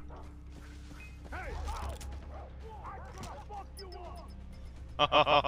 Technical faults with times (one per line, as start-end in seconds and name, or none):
3.92-5.47 doubled audio track